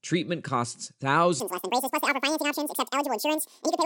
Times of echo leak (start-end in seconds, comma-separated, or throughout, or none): none